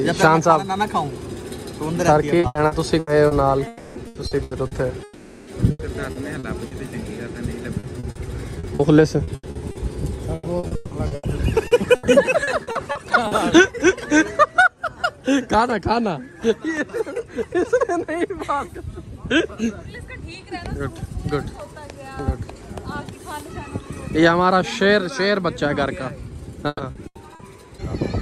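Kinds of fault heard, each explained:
Repeated packet loss (robotic sound): the network kept losing or delaying packets, and each hole was patched by stretching the last sound. Choppy stretches with pieces missing come at 2.39–3.34 s, 4.07–4.74 s, 5.71–6.74 s, 7.79–13.34 s and 26.67–27.42 s, with gaps up to 160 ms.
Long network dropout: a longer run of audio likely never arrived, and the receiver filled the hole by extending the last sound as a fading buzz or hiss rather than silence. This happens at 3.67–3.98 s, covering 280 ms, and at 5.03–5.50 s, covering 440 ms.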